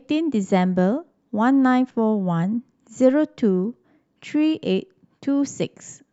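Nothing here gets in the way of listening: there are no dropouts, clicks, glitches or other technical faults anywhere in this speech clip.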